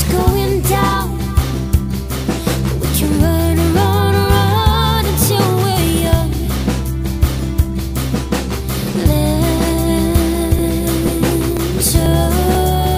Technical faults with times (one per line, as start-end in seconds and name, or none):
10.59-12.55 periodic USB or driver dropouts